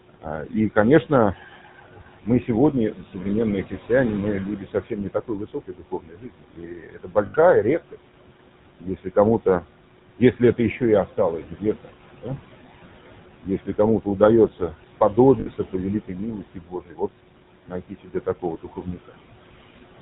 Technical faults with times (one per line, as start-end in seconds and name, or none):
0.00-20.01 noise suppressor artifacts
0.00-20.01 GSM full-rate codec
0.10-3.90 speech cut by the noise suppressor
4.46-7.96 speech cut by the noise suppressor
7.26-7.35 lost GSM frames
8.81-9.64 speech cut by the noise suppressor
10.18-12.28 speech cut by the noise suppressor
13.41-17.11 speech cut by the noise suppressor
15.40-15.47 lost GSM frames
17.66-19.15 speech cut by the noise suppressor